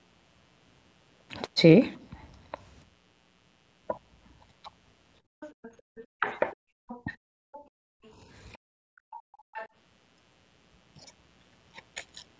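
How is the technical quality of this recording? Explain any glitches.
The recording has four problems: a constant buzz underneath, and a stretch from about 5.3 to 9.7 s where echo cancellation on a call disrupts both the speech and the room sound. The audio also stops at 8 kHz, which is normal for call microphone processing and is not a fault.

Mains buzz runs through the whole clip, based on 60 Hz. Sharp switching spikes, such as those from a dimmer, rectifier or unshielded cable, spread harmonics well up the spectrum. They sit about 35 dB below the speech as a steady, raspy buzz.

Speech suppressed in double talk occurs between 5.27 and 7.1 s. It is likely caused by the echo canceller hearing both parties at once and turning everything down. The talker's voice drops sharply, by roughly 40 dB at worst, for about 150 ms in total.

The other side's voice leaks through from 5.41 to 9.69 s. 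Sound from the far end, likely played on the talker's loudspeaker, was not fully removed from the microphone. A second, weaker voice can be heard roughly 25 dB below the main speech.

The background is gated by the echo canceller between 5.81 and 9.08 s. While the loudspeaker was active, the canceller clamped the microphone, so the room tone drops out by about 37 dB at its deepest. These dips add up to roughly a second, and the room tone returns each time the canceller releases.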